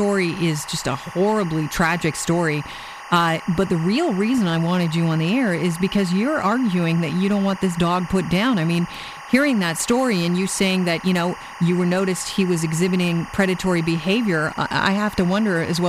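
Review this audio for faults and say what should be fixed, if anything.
Timecode bleed runs throughout: a chirping warble alternating near 1 and 2 kHz, roughly 15 dB under the speech, consistent with 24 fps code leaking from an adjacent track or cable. Prevent it by keeping timecode lines physically separated and shielded, and by checking track isolation before recording.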